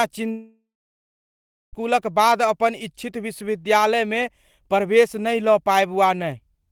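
Long network dropout, 0.31 to 1.75 s: speech decays into a fading buzz or hiss, then 1.07 s of silence, likely lost packets, before resuming with audio missing.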